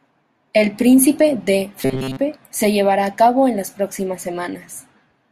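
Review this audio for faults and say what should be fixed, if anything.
From 1.79 to 2.18 s, just before "se llevará a cabo", the speech turns into a rigid, metallic buzz at 133 Hz. The syllables still track the speech loosely. This is robotic sound from repeated short buffers. New audio likely arrived too late, so a block of about 7.5 ms was replayed over and over. Most of the real audio in that stretch was skipped. To prevent it, give the audio path more buffering headroom so that playback never runs dry.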